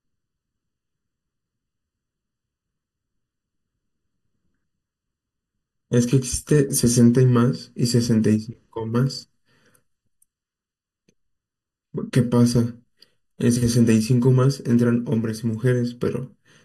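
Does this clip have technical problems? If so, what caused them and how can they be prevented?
Yes. The speech has channel delay (comb filtering) throughout. One channel arrives about 0.7 ms late, and the two are summed to mono. Shared content cancels at evenly spaced frequencies from about 700 Hz up, so it sounds hollow. Align both channels before any mono fold-down.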